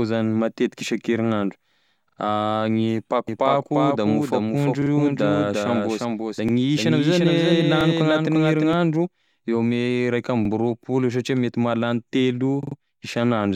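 At 2.09 s the speech stutters: a repeated buffer, where fresh audio failed to arrive in time and the same piece, about 43 ms long (which fits a 2048-sample buffer), plays twice more with a hard join at each repeat. Nothing seems to be skipped; the sound simply stalls and resumes.

From 3.28 s to 8.73 s a doubled audio track appears. A full-band copy of the speech trails the original by roughly 400 ms, about 5 dB quieter, with no decay or room colour. It starts and stops abruptly at those times, most likely because the signal was captured a second time through a slower path and mixed back in.

Inside that span, the same repeated-buffer stutter returns at 4.82 s with two extra plays, and at 6.49 s and 7.81 s with one extra play each. It occurs again at 10.45 s, with one extra play, and at 12.63 s, where the 43 ms piece sounds three more times, giving the longest stutter in the clip.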